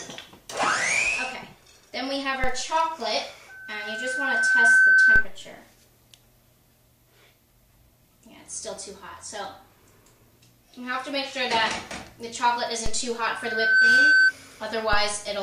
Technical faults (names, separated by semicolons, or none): DC step; loudspeaker feedback squeal